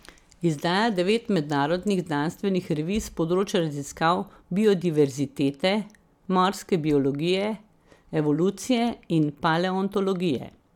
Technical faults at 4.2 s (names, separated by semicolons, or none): none